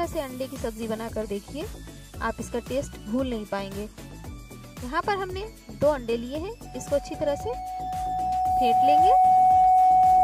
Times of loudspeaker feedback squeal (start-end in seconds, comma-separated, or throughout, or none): 6.65-10.23